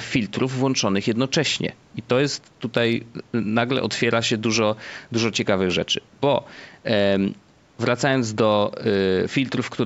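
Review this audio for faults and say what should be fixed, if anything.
Nothing here needs fixing; no faults are audible.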